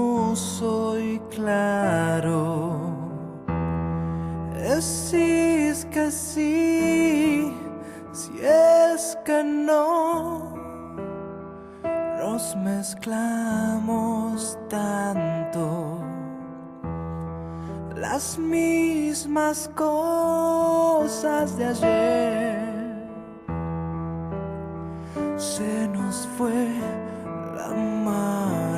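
Nothing in the recording jumps out as a technical problem, so there's no fault to point to here.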